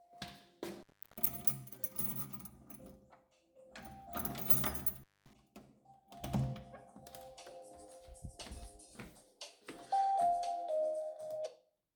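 A loose cable or plug connection briefly opened twice, an intermittent contact fault. From 0.72 to 1.29 s the line went open for about 0.35 s, and from 4.96 to 5.33 s for about 0.23 s. Each time the sound drops out with crackle at the edges, leaving faint hiss.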